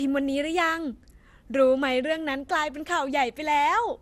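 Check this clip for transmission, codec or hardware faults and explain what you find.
The speech carries one fault across its whole length: generation loss. The smeared, swirling, hollow quality points to lossy coding around 96 kbit/s with an MP2-type codec, likely repeated around ten times. Each decode and re-encode requantises on a shifted frame grid, so noise and spectral gaps pile up and consonant attacks blur. On a spectrogram, content stops sharply at 16 kHz and the bands below look patchy and holed. In the waveform, transients appear softened and pre-smeared.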